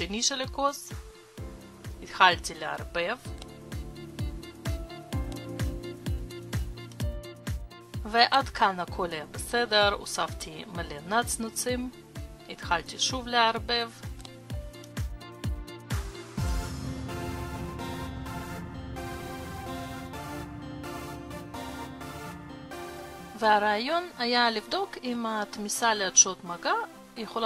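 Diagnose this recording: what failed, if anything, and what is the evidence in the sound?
Nothing failed; no stage in the chain shows trouble.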